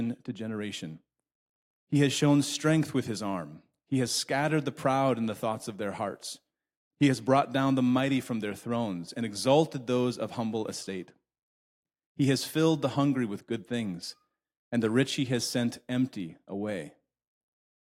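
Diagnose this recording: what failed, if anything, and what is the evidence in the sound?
The resampler restarted on every block, and it's audible as a steady 10 Hz tick from 8.9 to 12.8 s, after "the mighty from their" and before "the hungry with good". That fits a conversion from 44.1 kHz to 48 kHz with each 100 ms block converted separately, so every block edge is slightly wrong.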